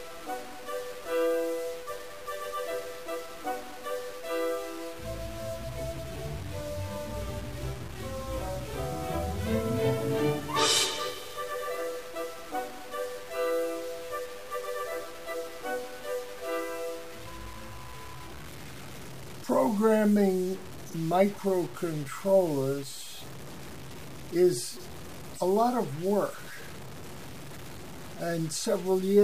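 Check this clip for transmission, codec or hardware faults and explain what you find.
One fault runs through the whole clip: low bit depth without dither, likely from truncating to about 6 bits, leaving grainy, signal-following distortion roughly 15 dB below the sound.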